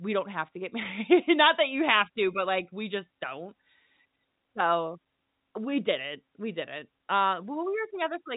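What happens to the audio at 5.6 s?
At 5.6 s the speech carries on intact, with nothing breaking into it beyond the steady telephone-band sound of G.711 coding, which keeps everything below about 3.8 kHz.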